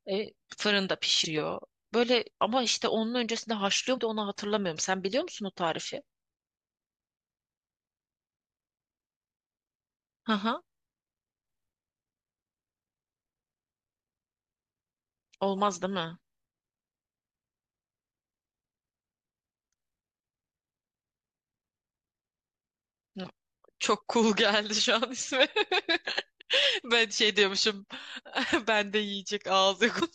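Speech with four short glitches at 1.24, 3.97, 26.41 and 29.99 to 30.02 s, from damaged data in a compressed stream that knocks the decoder out of sync.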